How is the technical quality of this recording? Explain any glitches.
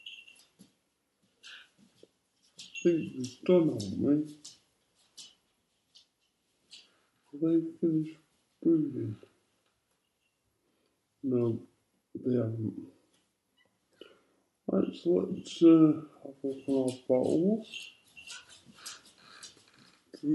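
The big problem runs through the whole clip: a wrong sample rate. Everything plays at about 0.73 times normal speed and roughly 5.5 semitones low, which fits 44.1 kHz material being clocked out at 32 kHz without conversion. Speed and pitch drop together, so the sound drags and sags downward.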